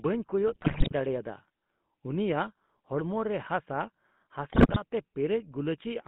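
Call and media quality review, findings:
GSM full-rate codec, throughout: buzzy, gravelly voicing in a narrow 150 Hz to 3.5 kHz band. Pulse-excited vocal-tract model fits a 13 kbps codec. Steady roughness, unlike packet-loss gaps.

GSM bit errors, 0.46–0.93 s and 4.5–4.8 s: squawks, pops and gargling. Corrupted filter, pitch and gain parameters distort frames. The speech is garbled rather than muted or repeated, unlike concealment.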